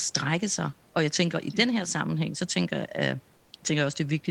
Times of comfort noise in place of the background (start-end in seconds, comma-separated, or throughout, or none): 3.37-3.53